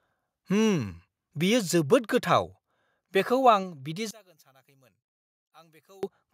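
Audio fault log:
1.5 s, 2.52 s and 3.63 s: microphone volume stepped down. The speech level drops suddenly at each point, by about 1 dB, then about 2 dB, then about 2 dB. Each step is abrupt and then holds. This is likely automatic input gain control lowering the device volume.
4.11 to 6.03 s: one channel inverted. The speech nearly vanishes, falling by about 30 dB. Only a faint residue remains. One stereo channel has likely flipped polarity, so the shared centre content cancels when the channels are summed to mono.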